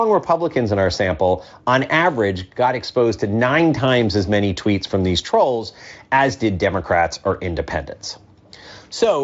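No technical faults can be heard anywhere in this speech recording. It has passed through a Speex encoder, and any trace of that coding is faint at most, which fits a high-quality setting somewhere around 34 kbps.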